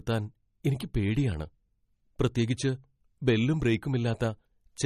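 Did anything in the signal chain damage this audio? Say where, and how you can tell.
Yes, at the codec stage: the damage runs through the whole speech clip and is likely MP3 compression. Nothing is present above 15.1 kHz, a hard shelf where the encoder discarded the treble, and the artefacts are plainly audible: a watery, swirling texture as weak frequency lines drop in and out between frames, chirpy sibilants, and smeared onsets. That degree of damage points to a low bitrate of roughly 35 kbps.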